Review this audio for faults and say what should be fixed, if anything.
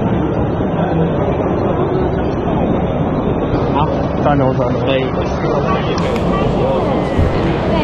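From 0.0 to 6.0 s the audio plays as an adaptive stream starting at a low bitrate: nothing sounds above about 6.3 kHz, so the top end is dull and codec artefacts are stronger, which fits a low-rate AAC rendition of roughly 24 kbit/s. At 6.0 s the player switches to a better rendition, nearer 96 kbit/s, and the treble returns abruptly with no gap. On a spectrogram this shows as a flat ceiling at 6.3 kHz that lifts sharply at 6.0 s, while the waveform stays continuous. To prevent it, start playback on a higher rendition or use the connection speed measured during earlier sessions.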